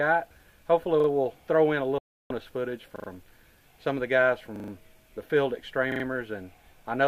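At 1.00 to 1.08 s a repeated buffer begins the pattern. Fresh audio reached the output late, so the device played its last block again. A 40 ms fragment sounds twice more with a hard join at each seam, giving a short stutter. Little or nothing is skipped, only delayed. On a waveform the same 40 ms shape appears repeated back to back, with a step at each join that shows as a thin vertical line on the spectrogram.

From 1.98 to 2.31 s comes a digital broadcast dropout. The receiver lost good frames and muted until valid data returned. A 320 ms hole opens, and whatever was sent in that span is gone for good. On a waveform the trace goes flat. On a spectrogram every frequency drops to blank across the whole band, with edges where the sound cuts out and comes back.

The same repeated buffer stutter returns three more times. At 2.96 to 3.08 s the fragment sounds three extra times. At 4.56 to 4.72 s it repeats four times, the longest stutter in the clip. 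At 5.92 to 6.04 s it repeats three times again. Each shows as identical 40 ms slices tiled in a row, consistent with a 40 ms buffer.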